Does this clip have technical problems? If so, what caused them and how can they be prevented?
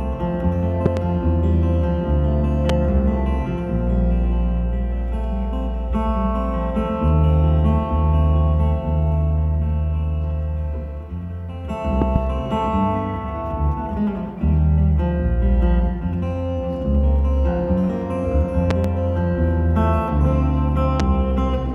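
Yes. The clip has loud pops at five points: a double pop from 0.86 to 0.99 s, a single pop from 2.69 to 2.72 s, doubles from 12.02 to 12.18 s and from 18.71 to 18.87 s, and a single pop from 21.00 to 21.02 s. Each one peaks around 15 dB above the sound, which carries on underneath. A likely cause is a sudden voltage pulse, from a plug, a switch, static or a driver glitch, entering the signal path. The circuits after it shape that pulse into a sharp thump. Prevent it by securing cables, grounding the equipment, and not switching or plugging anything in while recording.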